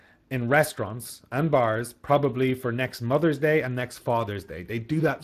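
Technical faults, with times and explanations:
Throughout, Speex codec: the speech has a plainly audible noisy, hoarse grain, which fits a bitrate around 22 kbps. The CELP coder models the voice with too little detail in its excitation, so the damage follows the voice itself rather than appearing as MP3-style warbling. Nothing sounds above 15.4 kHz.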